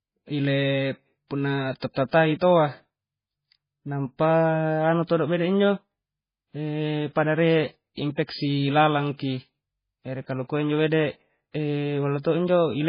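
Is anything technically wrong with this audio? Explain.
Yes. Throughout the speech the sound is dull and watery, with nothing above 5 kHz, swirling, warbling detail and smeared consonant attacks. This is likely heavy MP3 compression that cuts the treble and switches weak frequency lines on and off between frames, which fits a very low bitrate near 16 kbps.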